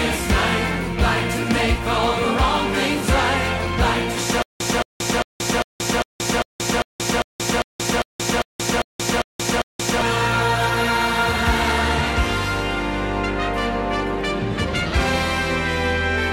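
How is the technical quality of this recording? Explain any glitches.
The recording has one glitch: a stutter with silent gaps from 4.42 s to 10.02 s. A short fragment of about 220 ms plays, then drops to dead digital silence for about 179 ms, and the same fragment returns, cycling every 0.4 s for 14 repeats. This is likely a stalled player or stream that replays its last buffered piece on each retry and then runs dry. The audio that belonged in that stretch never plays.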